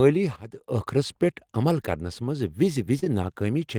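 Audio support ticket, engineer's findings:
Sudden gain jump, 0.36 to 0.68 s. Sound and background noise both drop about 12 dB at once, with no ramp, then snap back at 0.68 s. Likely cause: a gain setting or bit shift applied instantly in the digital path.

Short concealed packet loss, 2.99 s. About 20 ms of audio missing at the decoder; receiver extends preceding sound for 26 ms, then crossfades back. Audible as a brief smear.

Short concealed packet loss, 3.04 s. Back-to-back with previous; another 20 ms hole, bridged with 15 ms of synthesized continuation. Adds a wobble before real audio resumes.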